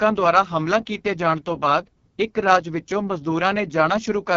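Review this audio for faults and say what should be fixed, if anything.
The whole clip has AMR wideband (HD Voice) codec damage. Nothing sits above 7.4 kHz, and the speech is heavily rough and raspy because the pulse-driven vocal tract model is starved of bits, which fits AMR-WB's lowest 6.6 kbit/s mode. To prevent it, run the call at 12.65 kbit/s or higher.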